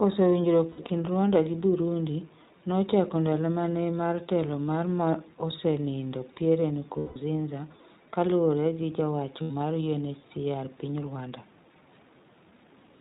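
It's a speech clip run through the iLBC codec the whole way, and you can plainly hear it: nothing above 4 kHz survives, and the voice has that slightly rough, synthetic grain. The damage fits iLBC at around 15.2 kbps with 20 ms frames. On top of that there are lost iLBC frames in three spots, where the decoder fills each gap by repeating the last pitch cycle mixed with noise, so you get a short held, buzzy vowel. The first, from 0.70 to 0.91 s, is broken up into bits spread over roughly 200 ms, the longest a bit under a tenth of a second. The second, at 6.98 to 7.18 s, is one longer dropout of about 180 ms. The third, at 9.42 to 9.52 s right after "kaluwore gi ja wacho", lasts about 80 ms. Each time the voice snaps back almost immediately, since every iLBC frame decodes on its own.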